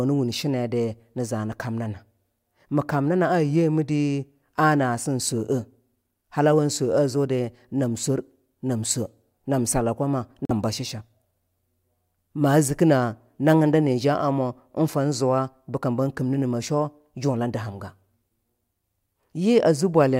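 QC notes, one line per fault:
10.45–10.51 s, corrupt frame muted: damaged bits in the compressed stream made the decoder reject the affected frames, and the player substituted silence rather than play garbage. In this speech the result is an abrupt 54 ms hole that cuts in with no fade and drops straight back out. Its length points to about two frames being lost. Timing stays intact, so the speech picks up exactly where it should after the gap, with nothing shifted or stretched.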